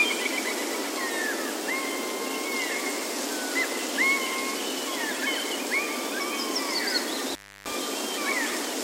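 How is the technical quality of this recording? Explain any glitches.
The recording has one glitch, an intermittent contact between 7.29 and 7.72 s. A loose cable or plug briefly lost its connection, breaking the signal path for about 0.31 s within that span. Electrically, the contact was unstable as it separated and rejoined, which puts crackle at both edges of the gap. While the line was open, the sound drops out entirely, and all that remains is a faint hiss until the connection closes again.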